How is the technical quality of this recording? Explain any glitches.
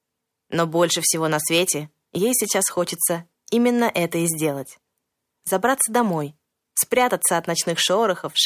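The technical quality of the recording is good, and there are no glitches to explain.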